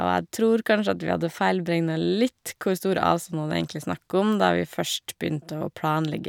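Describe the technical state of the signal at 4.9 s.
At 4.9 s the signal is intact, with no audible technical fault at that point in the speech.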